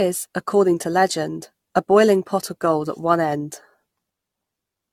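From start to finish, the speech has a swirly, watery texture with a hollow, phasey tone, consonant attacks smeared soft, and nothing above 17 kHz. This is generation loss, likely from around ten successive AAC-LC re-encodes, each requantising on a shifted frame grid so the noise and spectral holes stack up. Unlike a single low-bitrate pass, which the band limit would put near 96 kbit/s, the swirl and hollowness here are heavier than that bandwidth alone accounts for.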